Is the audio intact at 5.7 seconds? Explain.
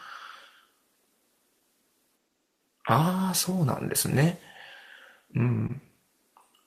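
No. Between 5.67 and 5.71 s there's short concealed packet loss: 20 ms of the speech never reached the decoder in time, so the receiver stretched the preceding sound over 12 ms and blended back in. It comes across as a quick smear or wobble.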